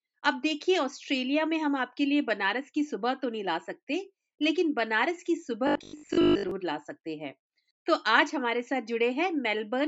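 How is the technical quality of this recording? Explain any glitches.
One glitch stands out, between 5.67 and 6.51 s. The sound turns into a rigid, metallic buzz there: robotic sound from repeated short buffers. The likely cause is audio arriving too seldom. The software keeps replaying the last 20 ms, so most of that stretch is repeats and the real audio is skipped. That repetition forces a fixed 50 Hz buzz onto the sound. The lowest bass is taken out, as expected from call microphone processing.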